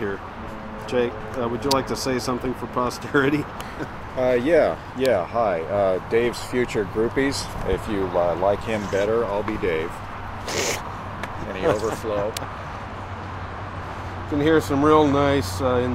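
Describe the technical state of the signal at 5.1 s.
A single sharp snap at 5.06 s sits on top of the sound, peaking near -5 dBFS. This is an electrical switching spike, likely from a nearby switch, motor or static discharge arcing briefly and being picked up by the audio line.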